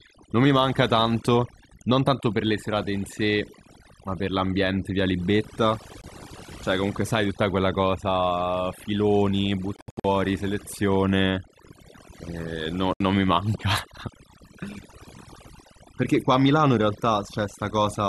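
Across the whole speech clip, overdone noise removal leaves the background near silent but flecked with twinkling specks. Quiet speech detail is gated away with the noise, unlike simple filtering, which would dull the tone evenly.

The speech drops to silence at 6.01–6.04 s, at 9.76–10.05 s (scattered gaps totalling about 209 ms, longest about 70 ms), and at 12.93–13.01 s. Each has abrupt or briefly faded edges and resumes further along rather than where it stopped, which points to a likely Bluetooth dropout of lost packets rather than a pause or edit.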